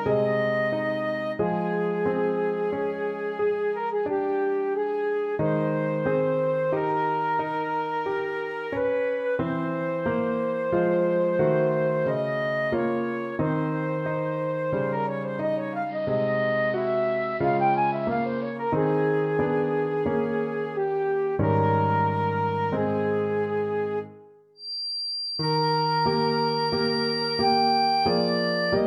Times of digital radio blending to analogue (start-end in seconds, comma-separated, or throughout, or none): 15.82-18.60